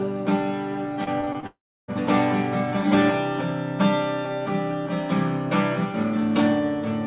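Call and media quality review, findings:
Repeated packet loss (robotic sound), 1.04 to 1.45 s: choppy stretch with five short holes, longest about 26 ms, each patched by stretching the previous sound. Roughly a quarter of that span is filler. Jitter buffer/network side.

Long network dropout, 1.47 to 1.90 s: sound smears into a fading buzz or hiss, then about 0.32 s of dead silence before audio resumes with a chunk gone. Likely the stream stalled upstream and the concealment ran out. Band-limited to 4 kHz, which fits G.711 A-law at 64 kbps.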